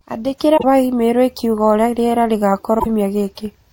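At 0.54 to 0.64 s and again at 2.76 to 2.87 s, damaged data in a compressed stream makes the decoder misread corrupted frames and hunt for the next valid header, producing a brief chirp, squawk, click or short hole in the speech.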